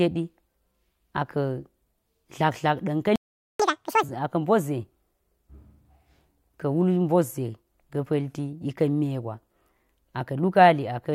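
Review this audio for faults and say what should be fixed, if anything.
A playback stall silences the speech from 3.16 to 3.60 s, about 0.44 s, most likely because the player's buffer ran dry or its thread was blocked. The waveform shows a flat gap, and the spectrogram shows an empty vertical band.

Catch-up at higher speed follows from 3.60 to 4.03 s, where the backlog plays at 2× speed. The voice rises by roughly ten semitones and sounds rushed. On the spectrogram, the harmonics and formants shift upward and the syllables appear compressed in time.

Give the player a larger buffer and keep its audio thread free of blocking work so that it never starves.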